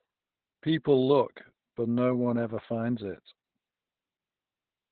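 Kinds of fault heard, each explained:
Opus voice compression: The speech sounds muffled, hoarse and slightly robotic throughout, with nothing above about 4.5 kHz, so the brightness and crispness of consonants are gone. The damage is heavy and points to a very low bitrate, around 8 kbps, with the encoder in its narrowband SILK mode. There, linear prediction models the speech, only the lower band is kept, and the excitation is coded so coarsely that it turns rough and buzzy.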